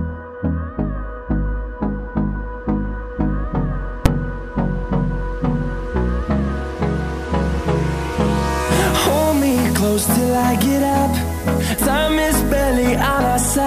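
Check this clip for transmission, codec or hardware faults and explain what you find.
One fault is present. At 4.06 s there is a single loud bang. This is invalid numbers at full scale. Somewhere in the processing, a calculation produced infinite or invalid values. These were clamped to the largest positive or negative sample value. The output was pinned at full scale for a block of about 5 ms. That block is too short to hear a separate pop at each end, so it lands as one sharp, very loud hit.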